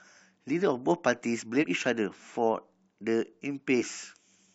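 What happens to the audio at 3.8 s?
From 3.77 to 3.83 s, damaged data in the compressed stream makes the decoder misread frames and lose sync, producing a brief glitch.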